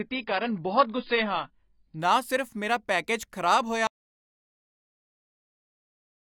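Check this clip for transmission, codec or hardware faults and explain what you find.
Two faults stand out: a low-quality start and a dropout that runs to the end.

From 0 to 2.0 s there's an adaptive stream starting at a low bitrate. The speech is dull, with nothing above 5.1 kHz and heavier codec smearing, which fits a low AAC rate around 16 kbit/s. At 2.0 s, just before "ਨਾ ਸਿਰਫ ਮੇਰਾ ਪੈਕੇਜ", it jumps cleanly to a much fuller sound, consistent with a step up to roughly 96 kbit/s once the player had gauged the connection.

At 3.87 s, right after "ਸਿਰਫ ਮੇਰਾ ਪੈਕੇਜ ਖਰਾਬ", there's an audio dropout to silence. The sound stops mid-flow and stays as dead digital silence, with no room tone, until the clip ends. The likely cause is a lost input, with silence written in its place.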